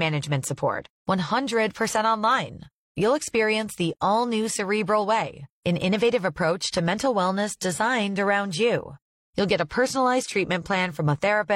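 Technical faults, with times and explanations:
Throughout: sample clock jitter. The converter's clock wanders by about a microsecond rms, so each sample lands slightly off its proper instant. Steep, fast-changing parts of the speech therefore pick up the largest errors, sitting about 40 dB below the signal as a faint rough hiss that swells on loud and sibilant sounds and disappears in pauses. On a spectrogram this appears as a diffuse broadband haze riding under the speech energy, strongest at high frequencies, and absent in gaps. The waveform looks essentially normal.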